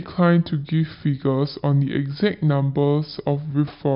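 From start to finish, the speech runs slow and deep, the signature of a wrong sample rate. The samples are clocked out at about 0.69 times their intended speed, which fits audio recorded at 32 kHz played back at 22 kHz, so the voice drops roughly 6.5 semitones. What separates this from a pitch shift or time stretch is that tempo and pitch fall together by the same ratio, with formants dragged down too.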